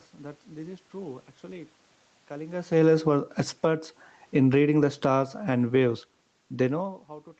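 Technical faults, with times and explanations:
2.63–6.99 s, automatic gain falling: the speech and the room noise behind it sink together by about 7 dB over more than four seconds. The automatic gain control judged the input too loud and lowered its gain slowly, pulling everything down at once.
3.03–4.14 s, automatic gain rising: inside that slow fall, speech and background swell back up together by about 6 dB over roughly a second. The automatic gain control read the input as too quiet here and raised its gain gradually, lifting the noise with the speech.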